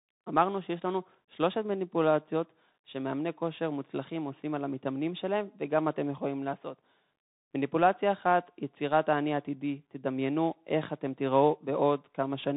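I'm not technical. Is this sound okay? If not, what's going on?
No. The speech runs throughout through a Bluetooth CVSD headset codec: nothing above 3.8 kHz survives, s sounds turn scratchy, and a grainy hiss sits underneath.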